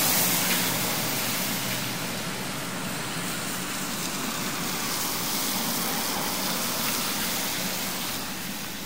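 Everyday sounds, with a doubled audio track running throughout: a dry, full-band copy trails about a second behind, roughly 10 dB down, likely from a second, slower capture path.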